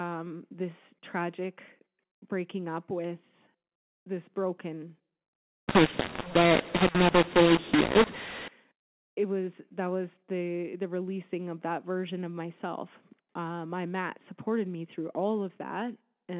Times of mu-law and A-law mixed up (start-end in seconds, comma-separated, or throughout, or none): 5.69-8.48